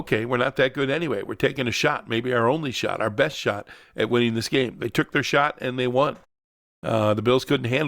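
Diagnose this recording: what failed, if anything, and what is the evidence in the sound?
At 6.79 s, after a 0.62 s pause, the speech comes back abruptly, with about 40 ms of its opening sounds missing up to 6.83 s. This is a clipped start after a pause at the playback stage: the output device dozed in the silence and needed time to wake before passing sound again.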